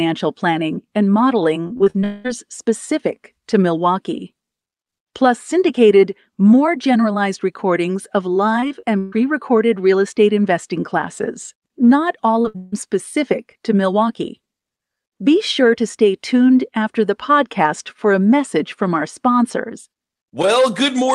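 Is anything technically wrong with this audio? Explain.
Yes, this speech clip has several network-loss problems, clustered in three spots. It came through a call path whose top end stops around 12 kHz, which fits a wideband call codec such as Opus.

Repeated packet loss (robotic sound) shows up from 1.67 to 2.04 s and again from 8.60 to 9.14 s. Audio kept going missing in quick succession, and each gap got patched by extending whatever came just before. The first stretch has five short holes, none longer than about 40 ms. The second has four, one of them about 135 ms long. In both, roughly a third of the span is filler, so the sound turns choppy and mechanical, with bits plainly gone.

A long network dropout follows right on from the first stretch, from 2.04 to 2.26 s, and another sits from 12.56 to 12.74 s. About 200 ms and 160 ms of audio are lost there. The stretches never go fully silent. 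Instead you hear a synthetic continuation, a held buzz or hiss standing in for the missing material, and then the speech picks up further along with the gap skipped. The likely cause is the stream stalling outright for a moment.

Short concealed packet loss hits at 12.42 s, a hole of about 20 ms. The receiver papered over it by carrying the previous sound forward and blending back in. You get a tiny smear or wobble right there.

A burst of packet loss comes just after, from 12.48 to 12.56 s, with about 60 ms missing. The last sound gets stretched and turned down across the gap, coming out as a brief fading buzz or hiss. It runs straight into the second dropout, so 12.42 to 12.74 s is one rough patch overall.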